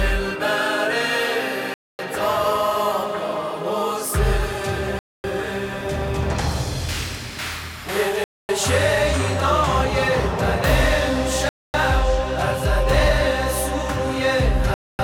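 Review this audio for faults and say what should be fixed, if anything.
Gaps between chunks: silent holes of 250 ms at 1.74, 4.99, 8.24, 11.49 and 14.74 s. They recur every 3.25 s, so 3 s chunks are separated by inserted silence. Schedule each chunk to start exactly where the previous one ends, and strip any padding at the joins.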